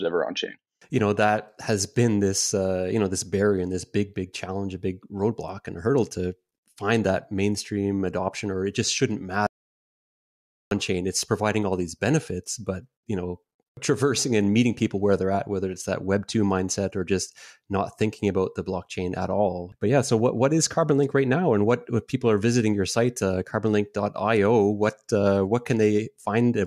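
At 9.47 s, right after "or it just shouldn't", the speech cuts off abruptly into silence with no room tone, and it resumes mid-flow at 10.71 s with "chain it's providing all". This is an audio dropout to silence lasting about 1.24 s, and whatever was said in that span is gone. The likely cause is a momentary loss of the input signal, with the recorder continuing to write silence until the feed returned.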